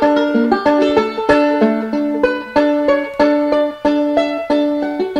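Nothing stood out as a technical problem on listening to this audio.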